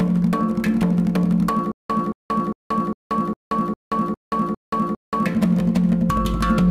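Stutter with silent gaps from 1.72 to 5.26 s: repeated 224 ms waveform blocks every 404 ms, separated by flat-line blanks, likely a stalled stream replaying its last fragment.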